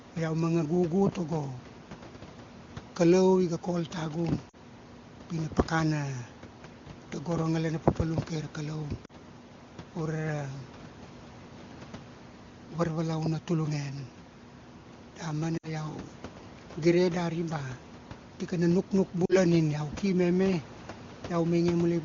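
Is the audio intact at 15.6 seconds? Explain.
No. Between 15.57 and 15.69 s there are lost AMR speech frames. Corrupted frames failed their checksum, so the wideband decoder reused the last good pitch and vocal tract settings at falling gain. The sound drops to near silence within two frames, then returns briefly rough.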